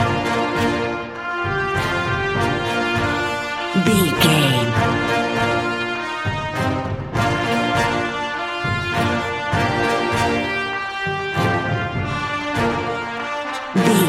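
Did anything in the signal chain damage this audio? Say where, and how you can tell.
No, no stage of the signal chain left an audible mark, and the signal holds steady in level, continuity and timing throughout.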